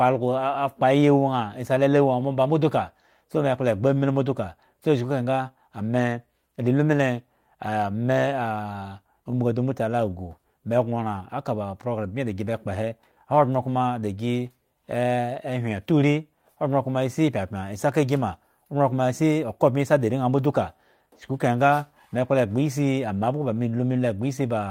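The sender's clock runs about 1.5% slow against the receiver's, a clock drift between sender and receiver that leaves the jitter buffer short and causes recurring timing hiccups throughout the speech. From 0.60 s to 24.49 s, repeated timing corrections duplicate short slices, adding around 300 ms in total and letting the speech run at 99% pace, with faint, irregular stutters.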